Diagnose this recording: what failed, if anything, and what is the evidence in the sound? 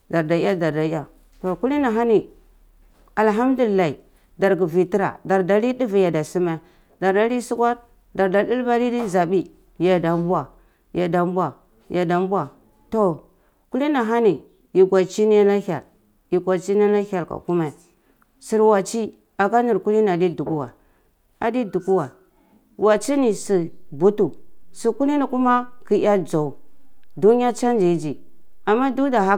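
A DC step in the converter stage, at 22.98 s. A single low thump or click marks the moment the waveform's zero line jumps to a new offset. The shift lasts until the clip ends. The speech carries on unchanged over the shifted baseline.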